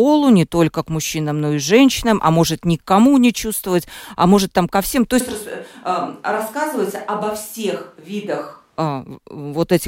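Speech recording with a switch to a distant microphone from 5.21 s to 8.78 s. At 5.21 s the sound abruptly turns roomy and hollow, the low end thins out, and the level falls by roughly 5 dB. Room noise rises to around 35 dB below the speech. At 8.78 s the close, full sound returns just as suddenly. The likely cause is that the close microphone's signal dropped out and a farther pickup, such as a camera microphone, filled the gap.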